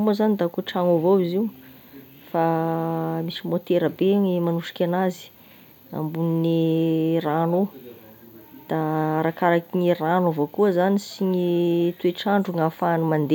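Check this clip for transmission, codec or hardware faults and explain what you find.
No transmission, codec or hardware faults are audible here.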